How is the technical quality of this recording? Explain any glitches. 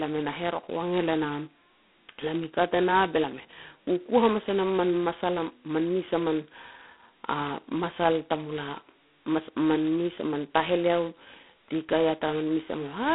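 Poor: G.726 ADPCM damage runs through the whole recording. Heavy, level-following rasp fits the codec's 16 kbit/s mode, where each sample keeps only a couple of bits of prediction error. On a spectrogram the band sits roughly 200 Hz to 3.4 kHz, blank above 3.9 kHz, with grainy noise smeared under every syllable. The waveform looks fuzzy wherever speech is loud.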